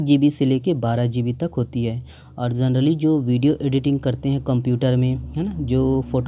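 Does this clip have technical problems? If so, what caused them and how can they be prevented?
No, there are no technical problems to point to in this recording. Nothing in it calls for a cause to be traced or a fix to be applied.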